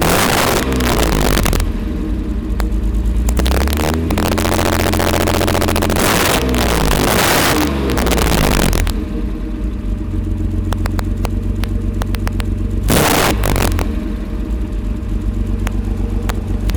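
The audio suffers from integer overflow across its whole length. The signal is driven roughly 15 dB past the top of the integer range, and instead of being held at the limit, every peak that crosses it wraps around to the opposite extreme. A small share of the samples, about one in twenty, lands over the limit, so the loudest moments burst into violent, snapping cracks. Ordinary clipping would flatten those peaks into a duller, buzzy distortion rather than these abrupt full-scale jumps.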